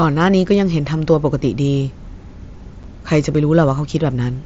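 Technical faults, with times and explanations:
2.83 s, unconcealed Bluetooth headset packet loss: one voice packet between headset and phone went missing and nothing replaced it, so the speech drops out for 7.5 ms, which fits a single lost mSBC packet, leaving a tiny hole with abrupt edges.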